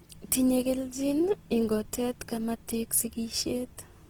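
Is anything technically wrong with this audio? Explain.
Yes. Throughout the speech there is plainly audible Opus compression damage, likely from encoding in its music (CELT) mode at a low rate, which fits roughly 16 kbps. Band energies are preserved, but starved bands are filled with folded or noise content, leaving the full-band sound grainy and rough rather than swirly.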